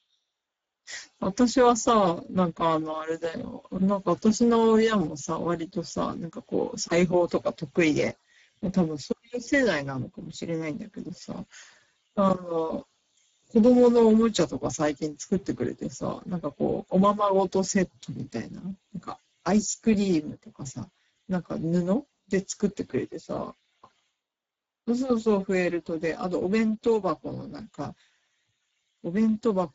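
The whole clip has been through the Speex codec, and the damage is easy to hear: the speech sounds hoarse and grainy, with nothing above 7.6 kHz. The CELP coder had too few bits for the excitation, which fits a bitrate around 10 kbps.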